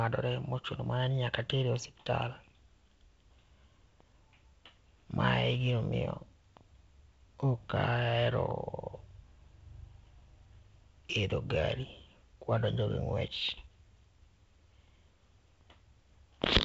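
Nothing's technically wrong with this speech recording; it's simply carried over G.722 wideband telephone coding at 48 kbit/s, so the sound tops out at around 7.8 kHz, as that link would have it.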